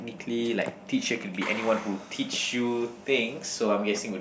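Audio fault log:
No faults were heard in this speech recording. Nothing in the audio calls for an entry in this log.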